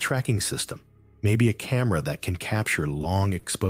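At 3.01 to 3.06 s and again at 3.39 to 3.46 s, there is a short stall from a late packet. The jitter buffer ran dry. The last sound was held for about 20 ms, then 40 ms, with a faint buzz or dip. Nothing is lost. Playback resumes slightly later each time.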